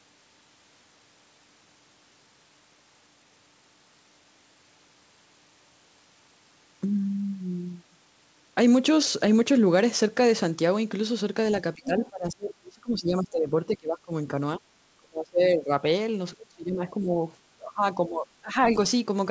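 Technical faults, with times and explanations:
11.75–14.33 s, 14.59–14.63 s, 14.9–15.84 s, 16.37–17.21 s and 17.57–18.67 s, speech suppressed in double talk: the talker dips sharply and breaks into pieces, by about 20 to 30 dB at the deepest. The first run is the longest, with about two seconds affected in total. The likely cause is an echo canceller that heard both sides at once, could not tell its own talker from the loudspeaker return, and ducked everything. On a waveform the envelope collapses in notches. On a spectrogram the harmonics fade or vanish in vertical gaps, below an 8 kHz ceiling that is present throughout.
11.86–12.09 s, other side's voice leaking through: a second voice surfaces briefly at about 15 dB below the talker, inside the first suppressed stretch. This is likely loudspeaker playback that the echo canceller did not fully subtract from the microphone. On a spectrogram, faint harmonic traces with a different pitch contour overlap the talker's for a fraction of a second. 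The waveform shows no obvious change because the leak is so low.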